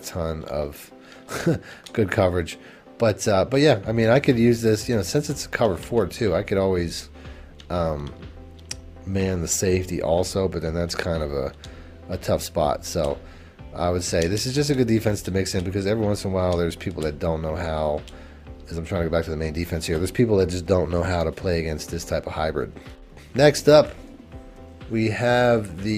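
No technical faults can be heard anywhere in the recording.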